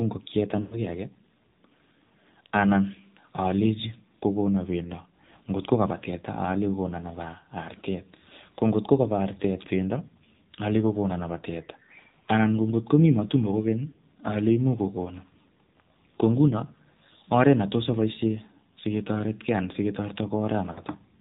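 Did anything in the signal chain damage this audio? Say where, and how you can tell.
Yes. At the codec stage, AMR narrowband mobile codec coding runs throughout: speech is buzzy and synthetic with nothing above 4 kHz, which fits a low mode near 7.4 kbps, not a simple low-pass filter.

On the radio link, lost AMR speech frames appear at 0.62–0.83 s, 13.88–14.00 s after "matumbo kokeny", and 20.72–20.82 s. The sound smears and fades instead of cutting to hard silence.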